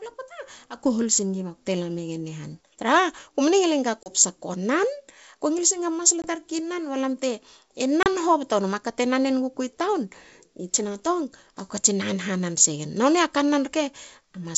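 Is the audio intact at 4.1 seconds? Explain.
No. Packet loss on an ADPCM call hits from 4.03 to 4.11 s, between "ngil enga" and "ko nan ko ngil". About 30 ms of audio, a few packets' worth, drops out and is replaced by a hard-edged silent gap. Because the decoder's adaptive predictor and step size no longer track the sender's, the speech resumes slightly distorted before the G.722 decoder resynchronises over the following tens of milliseconds.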